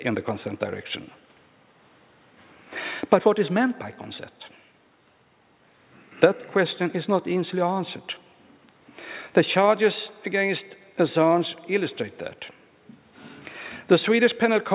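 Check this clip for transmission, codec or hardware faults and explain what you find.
No transmission, codec or hardware faults turn up here; the audio arrives through a call path with nothing above 4 kHz, a narrowband ceiling that fits a telephone codec such as G.711 mu-law at 64 kbps.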